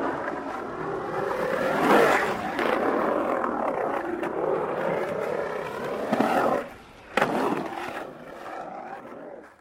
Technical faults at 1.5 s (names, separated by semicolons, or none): frames out of order